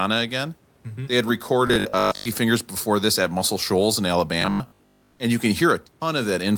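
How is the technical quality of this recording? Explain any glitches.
Two stretches of the speech turn robotic, from 1.68 to 2.26 s and from 4.42 to 5.12 s, just before "and you can". The voice collapses into a rigid, metallic 50 Hz buzz that still roughly tracks the syllables. This is robotic sound from repeated short buffers, likely caused by new audio arriving too late, so the playback kept looping the last 20 ms fragment. Most of the real audio in each span is skipped, and the fixed 20 ms repeat imposes the constant 50 Hz buzz. Room noise sits about 38 dB below the speech.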